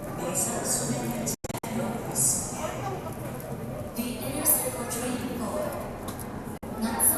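Digital broadcast dropouts at 1.34 to 1.64 s and 6.58 to 6.63 s: the receiver muted on bad frames, snapping the sound into brief silent holes, scattered first, then one 48 ms gap.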